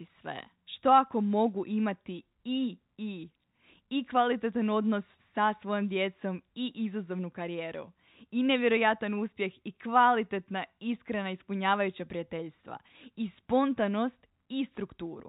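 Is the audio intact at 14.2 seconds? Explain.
Yes, the speech at 14.2 seconds is intact, with no fault at that moment beyond the narrow telephone band of its G.711 coding.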